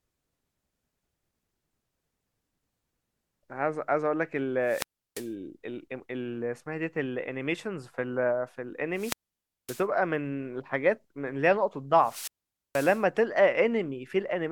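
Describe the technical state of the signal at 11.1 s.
At 11.1 s the speech signal is intact, with no audible technical fault at that moment.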